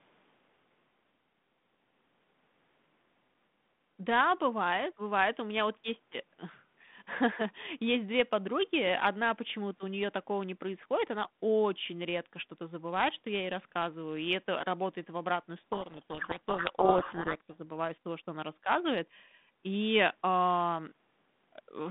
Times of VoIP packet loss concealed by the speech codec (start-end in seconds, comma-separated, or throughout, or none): none